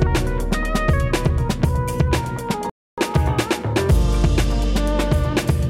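At 2.70 s the audio drops abruptly to silence and picks up again at 2.98 s from exactly where it stopped, with nothing skipped. That is a rebuffering stall: the player exhausted its downloaded audio and waited for more, adding about 0.28 s.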